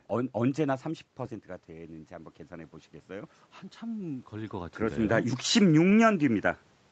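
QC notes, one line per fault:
1.67 to 4.82 s, automatic gain rising: the level at the mic drops by about 12 dB after the talker moves back around a second in, so the gain control slowly pushes up by about 5 dB, and speech and room noise swell together.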